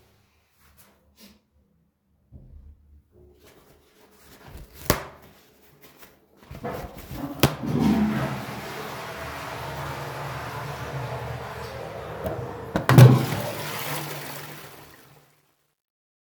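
From 13.92 s the fade-out shows truncation distortion, consistent with an undithered 11-bit stage. From 14.52 s the quietest part turns gritty.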